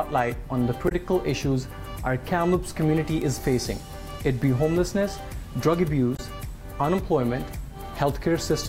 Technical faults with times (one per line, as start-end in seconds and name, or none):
0.88-0.92 damaged data in a compressed stream
3.22 bit error spike
4.44 bit error spike
6.15-6.20 damaged data in a compressed stream